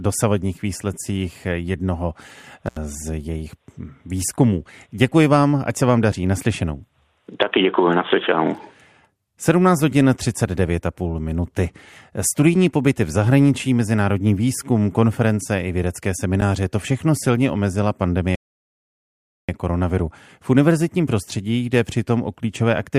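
Intermittent contact affects this speech recording from 2.66 to 2.77 s: a loose plug or cable connection briefly opens, cutting the signal for about 78 ms, with crackle at each edge and faint hiss left while the line is broken. A rebuffering stall follows at 18.35 s, right after "to všechno silně omezila": playback exhausts its downloaded audio and halts in silence until 19.49 s, then resumes exactly where it stopped, losing nothing but adding 1.13 s to the running time.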